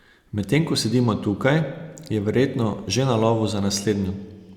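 Nothing stood out as a fault on listening to this speech recording.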